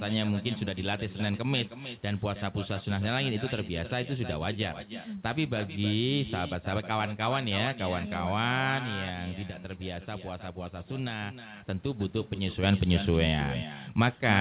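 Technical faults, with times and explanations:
Throughout, echo with no canceller: every phrase is trailed, roughly a third of a second later, by a thinner copy about 12 dB quieter, with the same 4 kHz ceiling as the call audio. The far end's loudspeaker is feeding its microphone, and nothing removes the returned signal.
8.79 to 11.56 s and 12.63 to 14.41 s, sudden gain jump: at 8.79 s the level drops abruptly by about 6 dB, background noise included, and recovers at 11.56 s. At 12.63 s it leaps about 6 dB louder until the end, likely from digital gain steps applied without a ramp.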